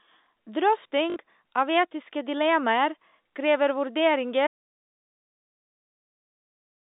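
At 1.10 s, just before "av etiske dilemmaer krever", there is packet loss with the last packet repeated. For about 60 ms the receiver had no new audio and kept replaying the most recent chunk of the speech. The stretch buzzes with a mechanical stutter at about 50 Hz, which fits 20 ms packets. On a spectrogram the band-limited telephone spectrum freezes into identical vertical slices with sharp seams, and the waveform shows the same short segment copied end to end.

From 4.47 s to the end the audio drops out to silence. The speech cuts off abruptly mid-flow and never returns. The gap holds no room tone or line noise at all, which means the input was most likely disconnected or muted while the recording carried on writing silence. On the waveform the trace collapses to a flat line. The spectrogram goes completely blank, with no residual energy even in the narrow telephone band that carries the speech before the cut.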